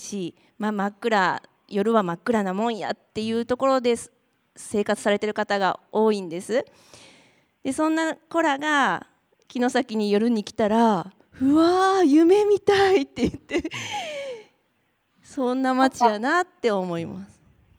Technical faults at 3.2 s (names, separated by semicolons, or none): resampler restarted on every block